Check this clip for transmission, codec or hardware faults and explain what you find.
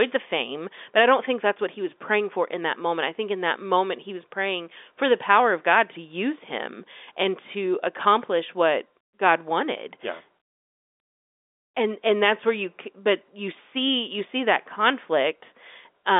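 No faults found: the speech sits in a 300 Hz to 3.6 kHz telephone band with nothing above about 3.7 kHz, consistent with 64 kbps G.711 mu-law coding working as designed, its quantisation noise at most faint.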